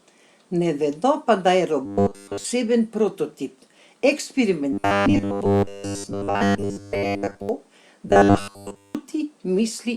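Robotic sound from repeated short buffers at 1.86–2.45 s, 4.73–7.49 s and 8.08–8.95 s: a rigid, metallic 100 Hz buzz, likely from a roughly 10 ms buffer replayed while new audio was skipped.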